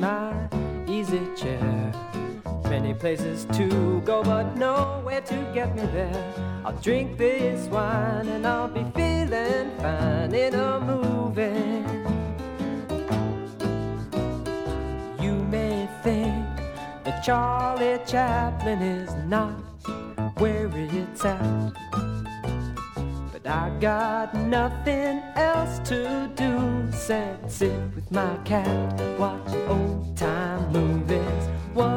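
From 4.84 to 5.12 s the level falls abruptly by about 6 dB, then recovers, most likely because one channel drops out before the mono sum.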